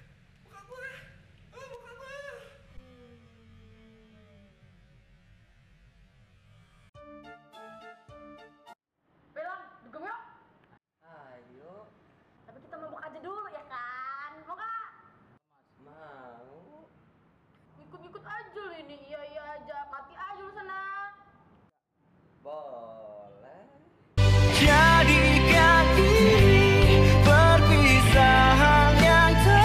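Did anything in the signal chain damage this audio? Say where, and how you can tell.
No, no signal-chain damage heard.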